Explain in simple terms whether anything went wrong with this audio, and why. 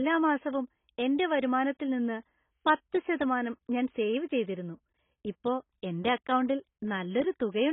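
Yes, the whole clip sounds dull and muffled, with nothing above about 3.8 kHz and a smeared, warbly edge, likely from heavy AAC compression.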